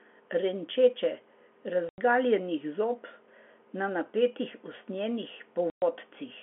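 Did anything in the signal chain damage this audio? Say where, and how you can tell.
Yes, at the network stage: packet loss filled with silence. The speech drops to dead silence from 1.89 to 1.98 s (90 ms) and from 5.70 to 5.82 s (120 ms), each gap opening and closing with hard edges. Both lengths are multiples of 30 ms, which fits whole 30 ms packets going missing with nothing played in their place. Concealment would smear or repeat sound, and converter dropouts wouldn't land on packet-sized steps. The G.711 telephone band itself comes through cleanly.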